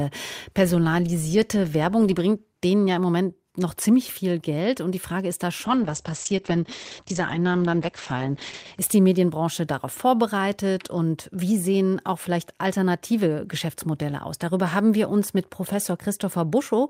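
At 5.66 s, just after "ist da", a call bitrate drop sets in and lasts until 8.83 s. The call's bandwidth estimate fell, so the encoder was told to spend far fewer bits. The speech turns rough and watery. The top end vanishes, with content above about 8 kHz cut away. The rate stays at its floor for about 3.1 s. The sound points to a fall from about 32 kbps to about 9 kbps.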